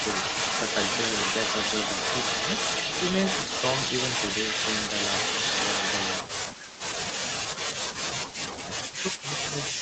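From the start to 6.23 s, an echo leak is heard, likely from a far-end loudspeaker whose echo canceller let part of the microphone pickup through. A copy of the speech returns about 346 ms late at roughly the same level as the original. A weaker echo leak, about 10 dB down with the same 346 ms delay, returns briefly from 7.09 to 7.19 s.

Speech suppressed in double talk begins at 6.23 s and continues to 6.91 s. It returns from 7.21 to 7.82 s, for a brief dip at 8.25–8.30 s, and from 8.49 s to the end. This is likely an echo canceller that couldn't separate the talker from loudspeaker echo while both sides spoke and turned everything down. The speech drops by up to about 40 dB, so it fades sharply or breaks into chopped fragments.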